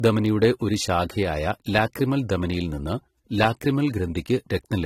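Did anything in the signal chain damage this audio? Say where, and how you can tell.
Yes, at the codec stage, and across the whole speech clip. Nothing is present above 16.6 kHz, and the artefacts of two different codecs are heard together. That mix points to transcoding between lossy codecs, likely a Vorbis-style encode followed by a low-rate AAC-LC encode. The second encoder spent its scarce bits re-coding the first one's artefacts and added its own, while the lower band-limit was preserved.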